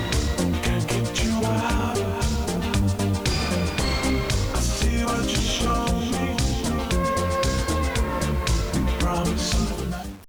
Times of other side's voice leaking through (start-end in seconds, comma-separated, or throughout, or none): none